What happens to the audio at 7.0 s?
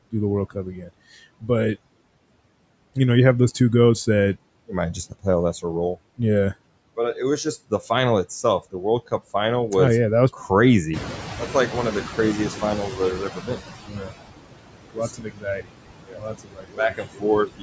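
Between 6.96 and 9.31 s, speech is cut by the noise suppressor. It mistakes soft stretches of speech for background and pulls them down by as much as about 20 dB, around 300 ms in all. The affected speech sounds swallowed or faint. Unlike a packet dropout, nothing stops abruptly or clicks: quiet parts simply sink.

Underneath, noise suppressor artifacts run through this moment too. With about 21 dB of noise removed, the remaining background dips between syllables and rises beneath them. Unlike plain room noise, it fluctuates frame by frame instead of holding steady.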